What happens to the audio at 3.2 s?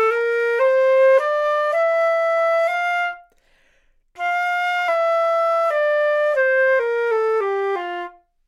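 Nothing goes wrong at 3.2 s; the sound carries on through that point with no audible fault.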